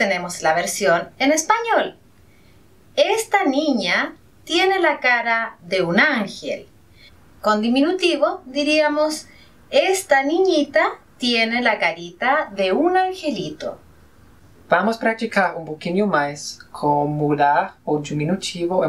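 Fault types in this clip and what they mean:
Dropped samples: at 3.54 s there is one sharp click, most likely from a handful of samples missing from the stream, about a tenth of a millisecond's worth. The waveform jumps straight from one value to a later one, and that step is heard as the click. Far too little is lost to remove any sound. On a spectrogram it shows as a thin vertical line across the spectrum, and on the waveform as a small discontinuity.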